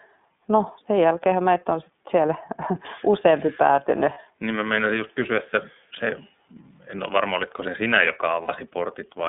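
From the start the speech sounds narrow and slightly rough and synthetic, with nothing above about 3.6 kHz and little below 200 Hz. The damage is plainly audible. This is the iLBC codec, a narrowband VoIP coder that encodes each frame's excitation independently of the previous one. The character fits its 13.33 kbps mode with 30 ms frames, which gives the telephone-band thinness and the slightly artificial edge.

At 4.14 s, right after "useampi päätynyt", a brief held, faintly buzzy vowel-like sound lasts until about 4.18 s. At 8.42 s, after "varma olitko se sinä", a similar but longer held buzz runs to 8.5 s. These are lost iLBC frames. With no data arriving, the decoder repeats the last pitch cycle blended with noise to fill the gap. The durations fit one missing 30 ms frame and then two, and because each frame decodes on its own, the sound recovers almost immediately.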